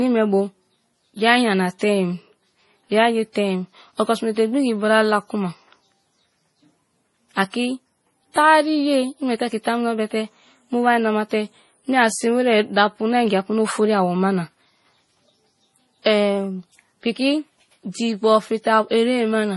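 Transcoding between lossy codecs runs through the whole clip, from start to finish. The speech carries two layers of coding damage at once: the smeared, slightly swirly texture typical of Vorbis at a modest rate, overlaid with the coarser warble and pre-echo of a low-rate MP3, which fits something like 64 kbit/s Vorbis followed by 32 kbit/s MP3. Nothing survives above 11.4 kHz, so the top end sounds dull. The likely cause is re-encoding, with the second codec spending its few bits on the first one's artefacts.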